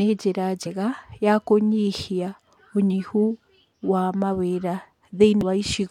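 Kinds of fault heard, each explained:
Damaged data in a compressed stream: corrupted bytes in the encoded speech make the decoder misread frames and lose sync until it finds the next valid header. Heard twice as brief blips, at 0.65 s just before "ya kũnyihia ũnyihu", and at 5.41 s.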